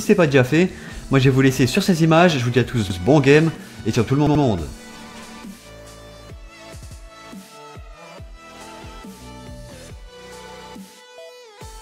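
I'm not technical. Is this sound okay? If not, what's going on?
No. There's a repeated buffer at 2.90 s, 4.27 s and 6.83 s: a short piece of about 85 ms plays twice, or three times, then continues. Nothing drops out or goes silent.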